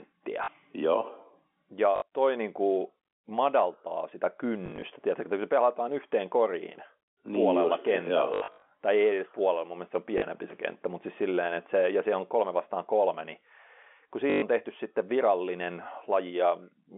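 Packet loss with the last packet repeated interrupts the speech at 0.44, 1.96, 4.66, 8.34, 10.18 and 14.3 s. The gaps run from 40 to 220 ms, and the worst, from 8.34 to 8.66 s, is scattered in runs up to 80 ms. The repeated segments don't join on the pitch cycle, and the repeats buzz robotically at about 50 Hz, which fits 20 ms packets. The waveform shows identical copied blocks. The spectrogram shows frozen harmonics inside the 3.5 kHz telephone band.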